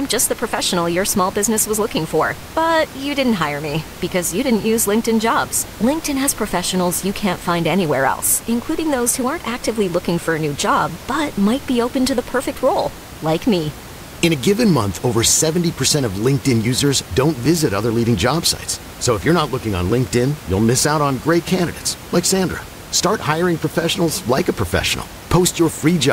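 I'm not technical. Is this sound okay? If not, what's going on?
Yes, there are no technical problems here.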